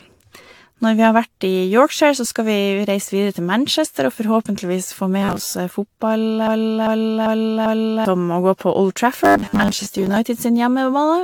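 The whole clip carries generation loss: swirly, hollow, smeared consonants, and nothing above 19.3 kHz. It's likely from the speech being run through a lossy codec several times, which sounds like AAC at around 96 kbit/s encoded about four times.

Right after "og forhåpentligvis få", from 5.22 to 5.53 s, you get robotic sound from repeated short buffers, a rigid metallic 100 Hz buzz. That fits roughly 10 ms chunks being replayed, likely because fresh audio arrived late, so most of the real audio there gets skipped.

From 6.47 to 8.05 s there's a broken-record loop. A 0.39 s fragment plays four times back to back, likely because the stream stalled and kept resending its last piece, so whatever followed is simply gone.

The robotic buzz returns from 9.24 to 10.16 s, again a 100 Hz drone with most of the real audio replaced.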